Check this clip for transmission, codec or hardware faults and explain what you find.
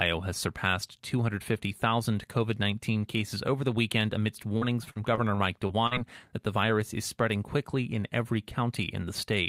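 One transmission fault is present: repeated packet loss (robotic sound) from 4.57 to 5.93 s, where seven gaps, the longest 44 ms, are patched by extending preceding speech, giving choppy, robotic speech.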